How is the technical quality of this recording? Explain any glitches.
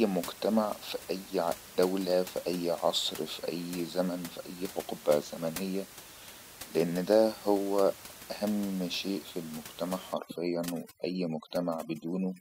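The main problem is overdone noise removal in the last couple of seconds, from 10.14 s to the end at 12.4 s. Before that, room noise sits about 16 dB below the speech. In that final stretch, a noise reduction stage set far too aggressively clamps down on every frequency band it judges to be near the noise level, taking the quieter parts of the speech with it. The background noise gives way to near silence dotted with twinkling, chirpy specks. On a spectrogram, the smooth noise floor breaks into scattered isolated dots, and the speech harmonics look ragged and gappy. On a waveform, the gaps between phrases drop close to flat.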